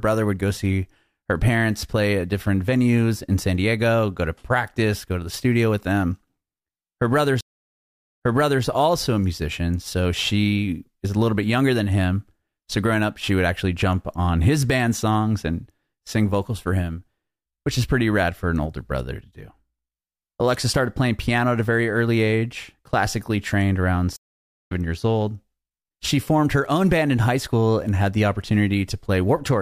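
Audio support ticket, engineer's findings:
Stream reconnect, 7.41–8.65 s: connection dropped, decoder restarted mid-stream. About 0.79 s dead air, then speech jumps back 0.44 s and repeats before "also a musician so".

Stream reconnect, 24.16–24.72 s: same drop and fresh decoder. About 0.54 s silence after "age classically trained around", resuming roughly a third of a second later at "years old", so a short chunk is skipped.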